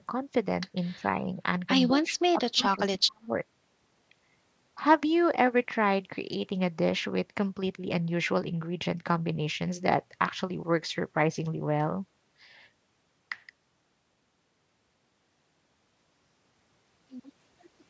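At 0.96 to 1.04 s and 1.21 to 1.28 s the speech dips by about 10 dB and 5 dB, then from 1.87 to 3.3 s it sinks deeply, likely speech suppressed in double talk, showing as a shrunken waveform and faded spectrogram energy.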